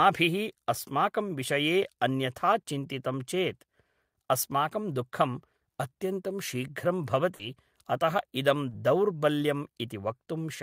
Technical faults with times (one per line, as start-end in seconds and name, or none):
7.35-7.41 short concealed packet loss
8.69-8.73 short concealed packet loss